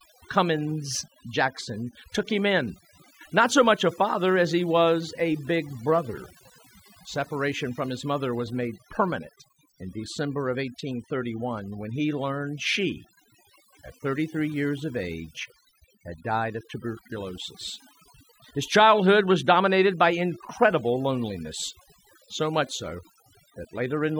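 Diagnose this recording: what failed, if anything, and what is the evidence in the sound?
Overdone noise removal in the call-processing stage runs throughout the speech. Pauses fall to near silence with twinkling specks. The suppressor is cutting any frequency band close to its noise estimate, taking quiet speech components with the noise.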